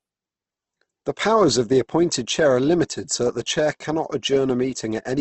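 Throughout, the speech sounds grainy and rough, with nothing above 8.2 kHz: likely Opus compression, fitting about 16 kbps, and noisy rather than swirling like MP3.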